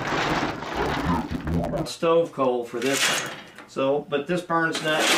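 From the start to 1.86 s the sound is dull and robotic, with a steady buzz at 100 Hz and no clear octave drop, then it clears. This is interleaved audio read as planar. Each 10 ms block of alternating left and right samples is split in half, with the first half taken as left and the second as right. Both halves play at half speed, so the overall pace holds, but the short blocks leave a buzz at the block rate.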